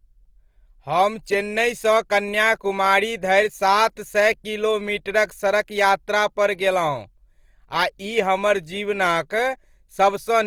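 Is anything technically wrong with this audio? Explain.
Yes. Opus compression runs throughout: the speech sounds grainy and rough, with likely low-bitrate CELT coding, around 24 kbps, filling starved bands with folded energy or noise.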